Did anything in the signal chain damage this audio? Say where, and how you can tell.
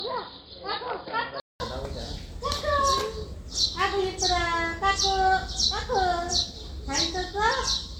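Yes. Generation loss sits at the codec stage and runs the whole clip. The sound is swirly, smeared and hollow, and attacks blur. That is worse than a single 128 kbit/s MP3 would give. It likely reflects several decode and re-encode passes stacking quantisation noise.

At the input stage, the first 1.6 s sounds dull and boxy. Nothing reaches above 5 kHz, and the level sits about 10 dB lower with a new noise floor. A 200 ms gap marks the change. That is likely an input switched to a poorer device.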